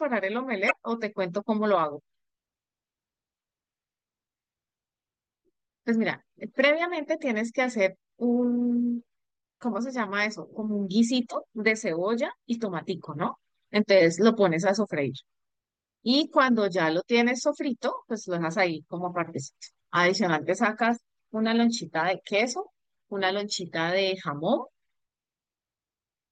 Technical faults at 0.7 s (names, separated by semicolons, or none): damaged data in a compressed stream